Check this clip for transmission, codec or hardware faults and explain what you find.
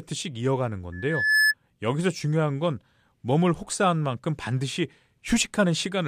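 One fault turns up, a loudspeaker feedback squeal. From 0.92 to 1.54 s a piercing 1.7 kHz tone swells over roughly half a second until it sits about 5 dB above the speech. A microphone is hearing its own loudspeaker, and at 1.7 kHz the loop gain exceeds one.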